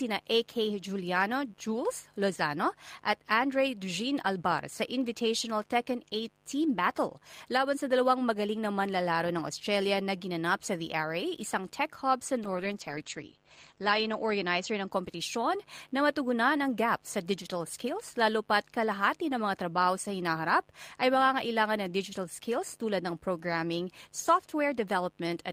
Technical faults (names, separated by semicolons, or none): call bitrate drop